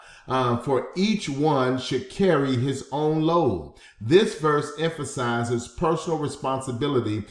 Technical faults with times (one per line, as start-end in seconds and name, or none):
none